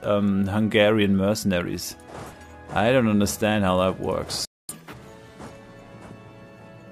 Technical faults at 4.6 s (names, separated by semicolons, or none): playback stall; catch-up at higher speed